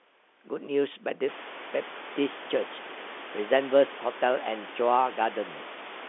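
The speech carries no technical faults: it sits in the ordinary telephone band of roughly 300 Hz to 3.5 kHz with nothing above 3.7 kHz, as expected from G.711 coding at 64 kbps, and the room's background noise, which rises by about 21 dB at around one and a half seconds, stays about 19 dB below the speech.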